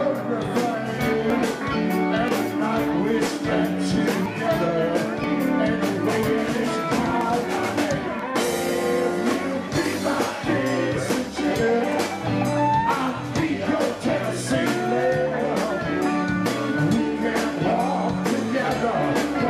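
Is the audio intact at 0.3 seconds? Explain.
Yes, the audio is intact at 0.3 s, with no dropout, click, distortion or other fault at that moment.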